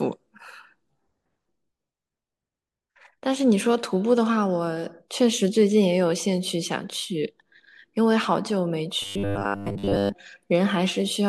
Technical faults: robotic sound from repeated short buffers

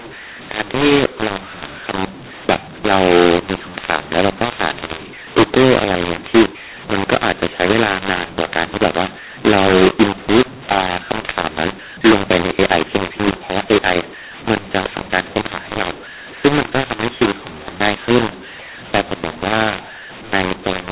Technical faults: mu-law and A-law mixed up

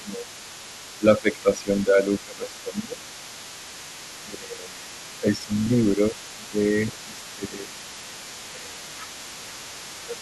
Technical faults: speech suppressed in double talk; other side's voice leaking through

